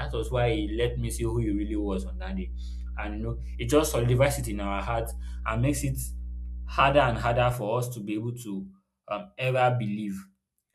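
From the start until 7.53 s, just before "for us to be", the speech sits over mains hum: a steady, unwavering tone at 60 Hz, about 10 dB below the speech. Power-line current has leaked into the signal, through a ground loop or a nearby transformer. Unlike wind or handling rumble, which wanders and swells, this hum holds a fixed pitch and level.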